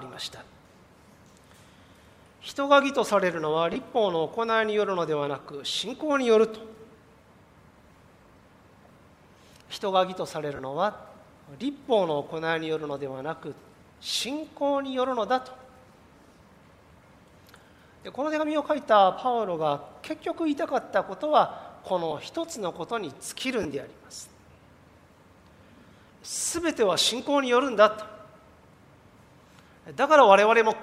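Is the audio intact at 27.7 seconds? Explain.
Yes, the audio at 27.7 seconds is intact, with no dropout, click, distortion or other fault at that moment.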